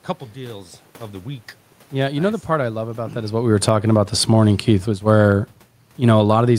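Automatic gain falling from 1.94 to 5.27 s in this speech clip, right after "deals of the week": the gain control judged the input too loud or its background noise too strong and eased its gain down by about 6 dB, so voice and room noise sink together. A separate level shift around 3 s is the talker moving.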